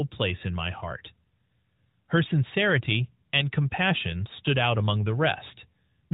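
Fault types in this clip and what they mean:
No faults detected in this speech clip.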